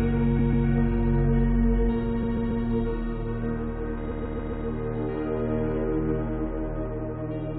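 Repeated frames cause three stutters in this everyday sound. The same 139 ms block, which fits a run of several compressed frames, plays two extra times from 0.38 to 0.66 s, three from 2.22 to 2.64 s and four from 4.10 to 4.66 s. The repeated audio adds about 1.25 s in total. On a waveform each stutter appears as an identical shape tiled end to end. A spectrogram shows the same pattern stamped in a row at 139 ms spacing.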